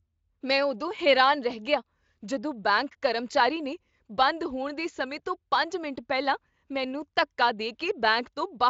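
No faults: the speech passes through Speex with little codec character audible beyond a band edge near 7.7 kHz, which fits a high wideband setting of about 34 kbps.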